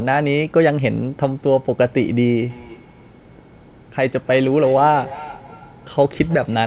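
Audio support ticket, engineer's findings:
Feedback echo between two devices from 2.37 s to end of clip. Speech returns about every 0.3 s, about 19 dB below the direct level, thinner with each pass. Probable cause: second device in the room replaying this mic's audio, which this mic picks up again. Local echo canceller ignores sound it did not play. Band-limited to 4 kHz throughout, which fits a G.711 narrowband call path.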